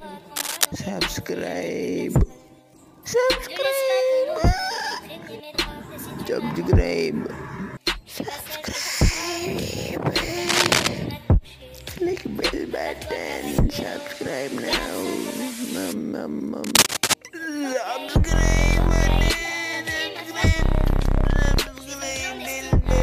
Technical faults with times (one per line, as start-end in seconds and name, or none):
0.36-0.66 cable scratch noise
10.48-10.87 cable scratch noise
16.64-17.16 cable scratch noise